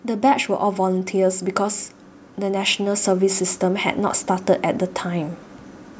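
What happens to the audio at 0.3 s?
At 0.3 s you're right at the start of an automatic gain rise that runs from about 0.05 s to 4.26 s. The call's gain control has decided the input is too quiet and is slowly turning itself up, ending roughly 7 dB louder. So the speech and the background noise swell together over those four seconds, a gradual creep in level rather than a jump.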